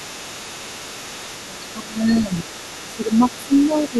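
From the start to the end, a faint second voice runs beneath the speech, roughly 20 dB down. That is the other side's voice leaking through, likely because the loudspeaker echo picked up by the microphone was not fully cancelled.

The main voice then dips by around 10 dB between 1.5 and 2.51 s, across roughly 0.7 s in pieces, and briefly again at 2.9 to 3.2 s, 3.38 to 3.52 s (about 15 dB here) and 3.9 to 3.99 s. This is speech suppressed in double talk, likely the echo canceller turning everything down while both sides spoke.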